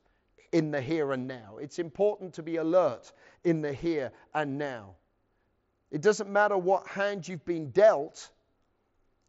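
No technical faults are audible.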